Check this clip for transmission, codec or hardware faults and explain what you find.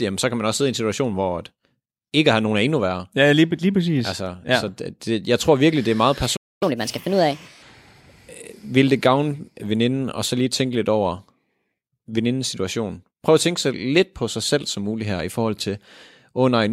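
Two related playback faults appear in this speech clip, one straight after the other.

From 6.36 to 6.63 s there is a playback stall: the speech cuts off mid-flow for about 0.25 s and then resumes. The likely cause is the player running short of buffered data or its thread being blocked. The waveform shows a flat gap, and the spectrogram shows a blank vertical band.

From 6.63 to 7.63 s comes catch-up at higher speed. The player resamples its backlog at 1.25 times normal speed, so the speech sounds hurried and raised by roughly four semitones before settling back. On a spectrogram the harmonics shift upward and sit further apart for that second.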